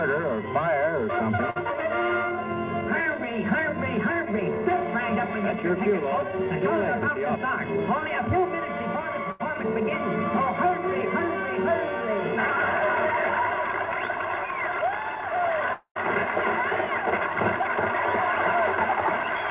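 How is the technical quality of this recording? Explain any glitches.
The recording has three glitches, all of them gaps where audio failed to arrive. It carries no content above 4 kHz, which fits a G.711 mu-law call path at 64 kbps.

Two bursts of packet loss occur, at 1.50 to 1.58 s and at 9.32 to 9.41 s. A run of packets never arrived. The receiver stretched the last sound into a fading buzz or hiss. The audio then jumps ahead, skipping about 60 ms and 80 ms.

A long network dropout, the likely cause, hits from 15.73 to 15.97 s. The last sound is held and decays, ending in roughly 80 ms of silence, about 0.2 s of fill in all. Playback then resumes about 220 ms further on, with that stretch gone.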